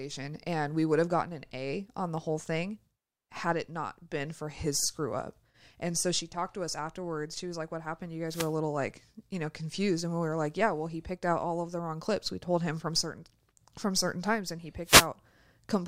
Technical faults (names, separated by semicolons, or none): wireless microphone noise hit